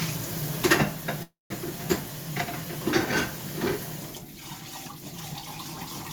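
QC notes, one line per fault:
1.23–1.52 s, call audio freeze: the last sound carries on and fades, then drops to about 170 ms of silence, and then the audio resumes exactly where it stopped, so nothing is lost but everything after is about 276 ms late. The likely cause is packets held up in transit until the jitter buffer ran dry. On a spectrogram, smeared repeated texture thins to a blank gap. The waveform shows a decaying tail, then flat line.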